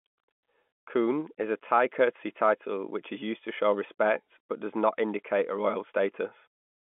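No technical faults are audible in this speech.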